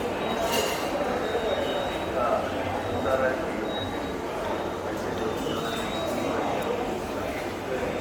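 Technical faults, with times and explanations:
throughout Bluetooth LC3 compression: the top end has a plainly audible grainy, hissy sheen, with fine high detail smeared into noise, though the band still reaches about 20.2 kHz. This fits likely LC3 coding near 48 kbps in 10 ms frames, which fills emptied upper bands with noise.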